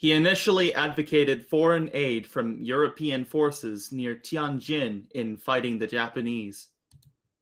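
No technical fault can be heard in the speech recording, and the Opus voice compression at 20 kb/s in hybrid fullband mode leaves only light coding traces.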